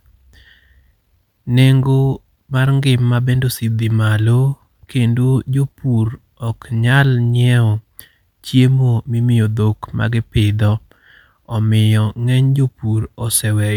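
No technical faults are audible anywhere in this recording.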